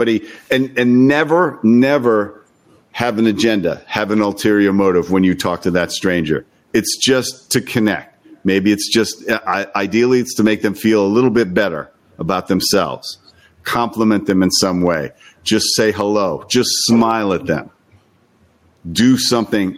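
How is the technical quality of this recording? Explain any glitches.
The recording has one fault, gain pumping, throughout. The gain ducks by around 10 dB under louder speech, likely from excessive input gain driving a fast limiter.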